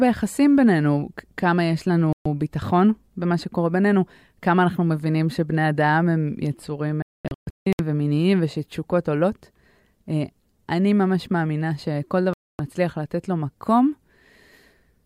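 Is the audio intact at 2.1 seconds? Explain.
No. A digital broadcast dropout begins at about 2.13 s and lasts until 2.26 s. The sound cuts to silence for roughly 128 ms and then resumes. The receiver lost the digital signal or got frames that failed their checksum, so it muted until valid frames arrived again. The gap's length fits about four lost frames. Whatever was sent during that span is gone and cannot be recovered from the clip.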